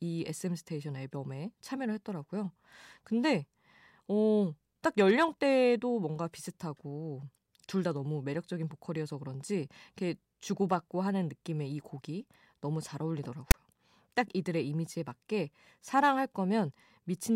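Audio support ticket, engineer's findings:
File tags played as audio, 13.51–13.54 s in speech. Hard-edged static burst, about 30 ms: text bytes decoded as samples give a loud rasp offset to one side, then zero padding drops to dead silence. Probable component: demuxer or parser not skipping the metadata block.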